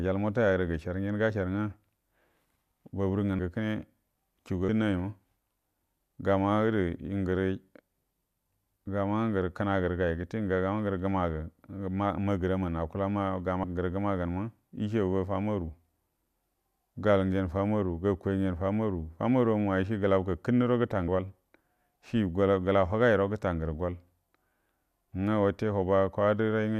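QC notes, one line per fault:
3.39, 4.68, 13.63 and 21.07 s: compressed frames skipped. The speech jumps forward at each point, dropping about 300, 150, 100 and 200 ms of audio. Whole coded frames are missing or were rejected by the decoder, and each frame holds about 24 ms of audio. At each join the speech resumes further along.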